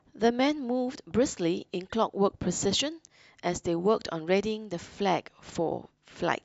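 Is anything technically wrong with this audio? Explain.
No, nothing is technically wrong with this audio.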